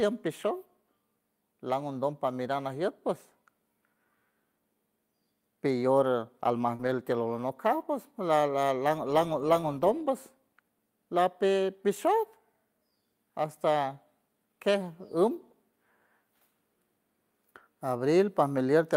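At 6.75 s, short concealed packet loss: about 40 ms of the speech never reached the decoder, and 34 ms of that was bridged by extending the preceding sound before fading back into real audio. It comes across as a brief smear.

From 6.79 to 6.89 s, overlapping the end of that gap, comes a lost packet rebuilt from error correction. Each missing packet was recovered from the low-bitrate copy carried in the next one, so 60 ms was played back from these coarser copies, which fits three 20 ms packets. There is no dropout, but the sound turns briefly rough and hissy. A spectrogram shows grainier, less defined harmonics with more noise filling the spaces between them.

At 9.61 s there is a second short concealed packet loss. This one is about 20 ms missing, 19 ms of it filled, and is heard as a tiny wobble. It appears as a narrow vertical band of frozen spectrum.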